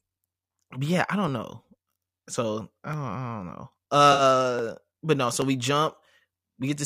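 At 4.12 s the speech turns briefly smeared and phasey, a hazy, noisy patch that holds the tone of the sound before it rather than moving on, and clear audio returns by 4.22 s. This is AAC frame loss with concealment: about 64 ms of coded audio went missing, which fits roughly three AAC frames, and the decoder bridged the gap by reusing the last good spectrum with randomised phase, producing that washed-over texture instead of a hard dropout.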